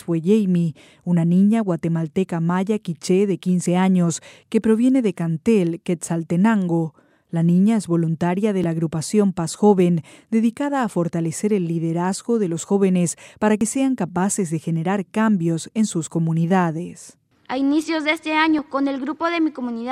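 At 8.64, 13.61 and 18.59 s the speech skips about 30 ms, spliced without a gap, every 5 s: likely audio missing between chunks during recording.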